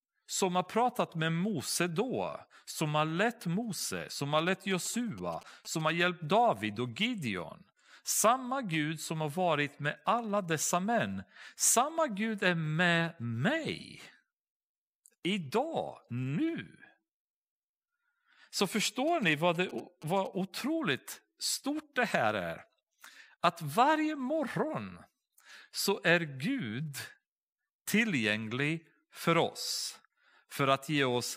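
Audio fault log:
4.39–5.90 s and 19.08–20.27 s, GSM signalling bursts: a galloping dit-dit-dit of short buzzes sits about 20 dB under the speech, the first just after "som har" and the second ending right before "otroligt stort det här". A nearby 2G phone was sending brief groups of radio bursts while signalling rather than carrying a call. The audio circuitry rectified that RF into clicks, and the buzz is the 217 Hz burst rate.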